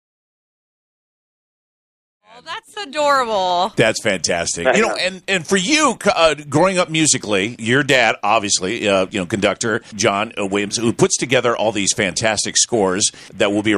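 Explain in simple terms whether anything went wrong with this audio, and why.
Nothing went wrong here: the sound just eases in gently, rising smoothly from around 2 seconds to full level by about 3.16 seconds the way an editor would fade it up, with no click or sudden jump.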